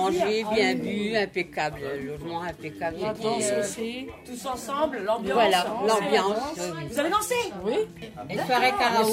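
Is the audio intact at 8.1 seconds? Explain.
Yes, the audio is intact at 8.1 seconds, with no dropout, click, distortion or other fault at that moment.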